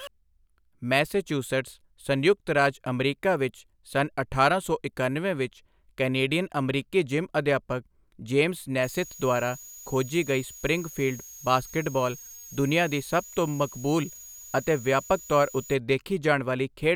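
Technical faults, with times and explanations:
8.83 to 15.74 s, switching supply whistle: a thin high whistle sits under the speech, its pitch wandering between about 6.58 and 6.88 kHz, at roughly 20 dB below the voice. A switching power supply has likely dropped into an audible burst mode or is beating with another one, so its switching rate falls into the hearing range and shifts as the load varies. On a spectrogram it shows as a narrow, slightly wavering line near 7 kHz across that span, too small to see on the waveform.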